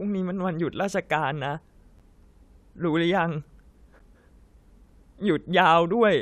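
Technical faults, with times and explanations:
1.99 s and 3.99 s, gap between stream segments: abrupt silent holes of 10.8 and 8.4 ms, where 2-second segment timestamps don't meet and the player pads silence.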